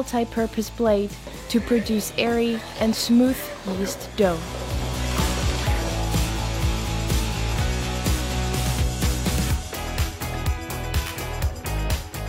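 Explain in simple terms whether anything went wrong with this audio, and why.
Nothing went wrong with this audio, so there's no problem to explain.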